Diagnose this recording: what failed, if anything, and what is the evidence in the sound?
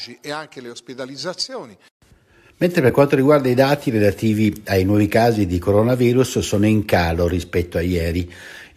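AAC frame loss with muting at 2.90 s, just before "quanto riguarda i dati": a brief, soft-edged dropout. This is a network-stage loss. The decoder zeroed one missing frame of about 10 ms, which fits the short frames of likely low-delay AAC, and the overlapping windows faded the speech out and back in.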